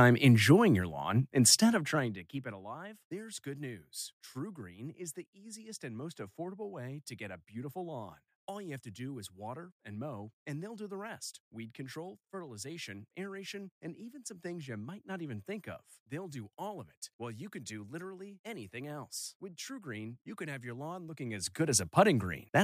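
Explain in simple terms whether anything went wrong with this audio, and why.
A fast ticking, like a zip being pulled, rides on the speech from 1.66 to 2.6 s as the level drops, and again from 21.1 to 21.92 s as it rises. This is zipper noise: the volume moved in small abrupt jumps, about fifteen a second, instead of gliding, and each jump clicks.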